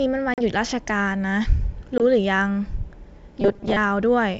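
At 0.34 s the speech drops into a hard-edged silent gap of about 40 ms, which fits roughly two lost packets. This is packet loss on an ADPCM call. When audio resumes near 0.42 s, the receiver's adaptive predictor and step size no longer match the sender's, so the speech comes back slightly distorted for a brief moment until the decoder re-tracks. The same happens at 1.98 s, with a 20 ms gap, about one packet, and recovery by 2.03 s.

From 3.41 to 3.77 s the speech turns into a rigid, metallic buzz pitched at 200 Hz that still loosely follows the speech. This robotic sound is likely caused by repeated short buffers. Audio arrived too slowly, so a 5 ms segment was replayed to fill time, and the 200 Hz buzz is the repeat rate of that buffer. Around half the material in this stretch is repeats, and the real audio in between is skipped. Throughout the clip, the G.722 wideband coding carries the speech with clear bandwidth to 7 kHz.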